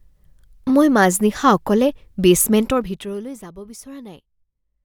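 From 2.60 to 3.48 s, zipper noise appears. The speech fades down by roughly 20 dB in 1 dB steps, about thirty a second, each step ticking audibly.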